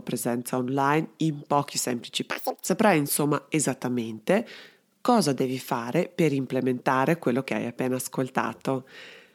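Audio read two samples at a time (double speed), from 2.31 to 2.65 s: for about a third of a second the playback treats each pair of samples as a single frame, as if the data held two channels or samples twice as wide. The speech in this stretch runs at 2.0 times normal speed and jumps an octave higher.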